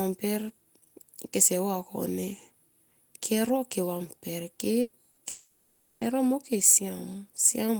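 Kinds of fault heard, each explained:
Burst of packet loss: A short run of speech packets failed to arrive in time, so the receiver filled each gap by extending the last sound and fading it down. At 4.81 s about 120 ms is replaced this way, and at 5.11 s about 60 ms, each heard as a brief held buzz or fading hiss. The speech then picks up further along, with that stretch missing.
Long network dropout: The stream most likely stopped arriving altogether for about 0.72 s, from 5.29 to 6.04 s. The receiver kept stretching the last sound, which fades as a buzz or hiss rather than falling into true silence across the whole gap. When audio returns, the speech resumes further on, and everything in between is lost.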